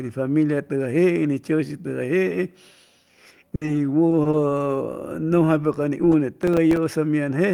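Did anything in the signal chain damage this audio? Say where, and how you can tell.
Yes. From 3.55 to 3.63 s the sound stretches into a fading 60 ms hold before resuming further on: a burst of packet loss on the network, concealed by the receiver.

Brief smears or wobbles at 3.65, 4.09, 4.23 and 4.31 s, each about 20 ms, are short concealed packet loss: missing network packets patched by the decoder extrapolating preceding sound.

From 6.43 to 6.77 s a gritty crackle rides the speech: processor overload crackle at the driver/buffer stage, with around ten missed buffers, roughly 3 ms each, dropping to silence.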